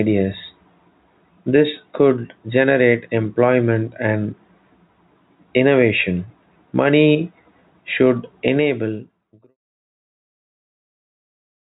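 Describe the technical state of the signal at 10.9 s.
Gain pumping runs through the whole clip, including 10.9 s. The input gain is set too high, and a fast limiter or compressor is likely pulling it back down whenever a loud sound arrives and releasing it in the gaps. This gives a level swing of about 5 dB, and the dynamics sound squashed. By this point the fade-out that ended at 9.57 s has already taken the level down, and the audio carries the usual narrowband call sound, with nothing above 4 kHz.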